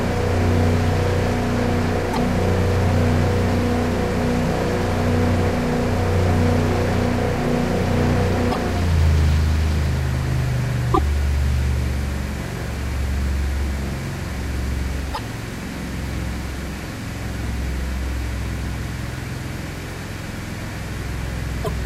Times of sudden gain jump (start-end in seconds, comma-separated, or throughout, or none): none